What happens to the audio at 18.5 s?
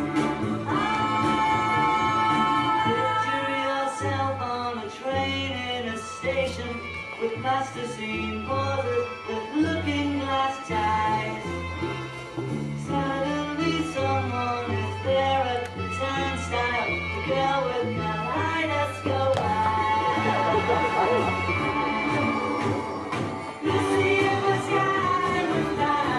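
Nothing goes wrong at 18.5 s; the audio runs through that moment intact, with no break, click or distortion to be heard.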